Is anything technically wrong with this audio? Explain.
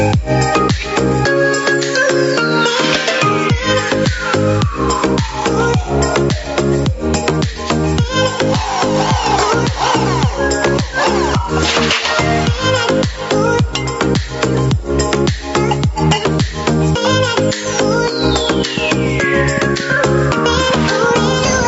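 Yes, there are two faults.

Gain pumping runs throughout. The level swells and ducks by around 10 dB around loud moments, likely from excessive gain with a fast limiter. The waveform's envelope looks flattened and breathing.

A train of clicks runs from 18.78 s to the end. It is irregular ticking at about 7 per second, roughly 5 dB above the sound, likely from interference or a faulty connection or power supply. A spectrogram shows thin vertical lines.

Nothing appears above 8 kHz, which matches the call path's band limit.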